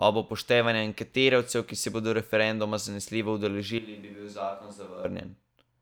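At 3.79 s, right after "se bodo referenduma zanesljivo", the speech suddenly turns roomy and hollow, with thinner low end, a level drop of roughly ten decibels, and background noise rising to about 25 dB below the speech. This is a switch to a distant microphone, likely because the close microphone's feed dropped out and a farther pickup filled in. At 5.05 s the close, full-bodied sound returns just as abruptly.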